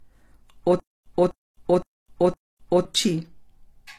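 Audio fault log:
Throughout: low-bitrate audio saved at a high bitrate. The file is a high-rate MP3, but nothing comes through above 15 kHz and the first encoding's artefacts are still there. That points to a low-bitrate AAC-type source, likely re-encoded, so the bigger file recovers none of it.
0.80 to 2.85 s: stutter with silent gaps. A 253 ms burst plays four times at an even 513 ms pace, each time followed by about 260 ms of dead digital silence. That's likely the stream stalling and replaying its last fragment on each retry, and whatever belonged in that stretch is simply gone.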